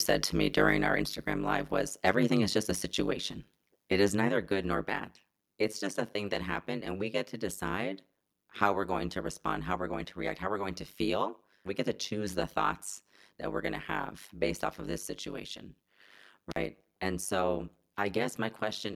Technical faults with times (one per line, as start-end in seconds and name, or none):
0.00-18.95 overlap-add ripple
2.07-2.09 microphone overload
16.50-16.56 intermittent contact